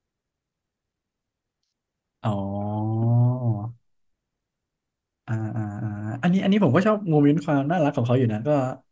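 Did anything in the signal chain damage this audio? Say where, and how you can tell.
No, nothing in the signal chain damaged this audio.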